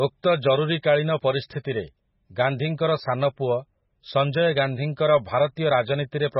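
Throughout, heavy MP3 compression: nothing above 5.6 kHz and a watery, swirly smear on sibilants, likely from a very low bitrate near 16 kbps.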